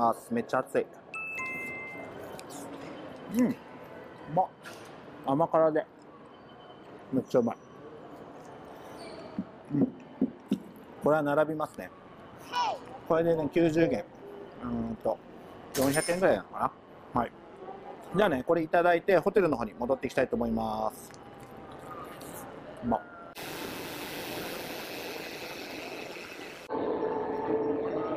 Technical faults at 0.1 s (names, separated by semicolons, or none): none